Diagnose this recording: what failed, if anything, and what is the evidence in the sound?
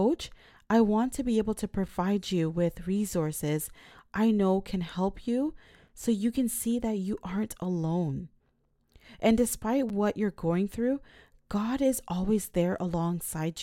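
Gap between chunks in storage or playback: 4.0 s chunks are joined by 6.5 ms silences, cutting hard-edged holes at 1.88, 5.89 and 9.89 s.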